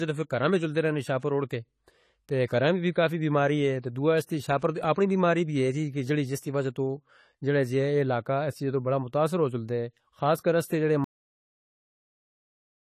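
Throughout the recording the speech is dull and plainly smeared, with nothing above 14 kHz and a watery, fizzy edge on sibilants. This is likely AAC compression at a low bitrate, consistent with roughly 32 kbps. Unlike simple low-pass filtering, it also leaves warbling holes in the spectrum.

From 1.19 to 1.23 s, just after "میں جال دے رہنے", a short hiss of about 35 ms comes before a sharp onset, which then sounds softened. This is pre-echo: the codec spread quantisation noise across the whole block, ahead of the attack. A click or dropout would not lead into the attack this way.

At 11.04 s, right after "خاص کر اس جڑے", the audio has a cut-off end. It stops mid-sound and falls straight to digital silence with no decay, because the final buffers were never played. A fade-out or gate would taper first, and here it does not.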